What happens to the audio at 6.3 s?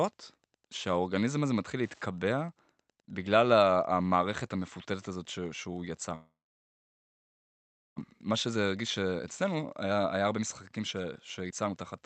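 At 6.3 s the audio is inside a long network dropout running from 6.15 s to 8.00 s. The stream likely stalled on the network and the receiver ran out of audio, so it briefly stretched the last sound into a fading buzz or hiss before going quiet for most of the gap. When sound returns at 8.00 s, about a second of the original is gone, and the playback delay has shifted by something like 0.7 s. On a waveform this shows as a short decaying tail followed by a flat stretch. On a spectrogram the harmonic bands smear into a fading blur and then give way to an empty block.

The Wi-Fi interference that runs through the whole clip continues across this span. A nearby radio's beacon, repeating every 102.4 ms, is rectified by the audio circuit and heard as a faint ticking about ten times a second, roughly 40 dB below the speech. A spectrogram shows it as evenly spaced thin vertical lines, and the waveform shows it as small regular spikes.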